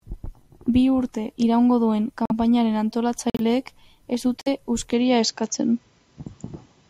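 The clip is speech, with two kinds of fault. Corrupt frames were muted at 2.25 to 2.32 s, 3.30 to 3.41 s and 4.42 to 4.48 s. Each is an abrupt silent hole where damaged compressed frames were rejected and replaced with nothing, while timing stays intact. From 4.93 s to the end, the sound abruptly turns duller, with nothing above 7.6 kHz. Level shifts by a few dB and a faint new background appears, well below the speech. There is no gap at the change. The input was likely switched to a poorer device.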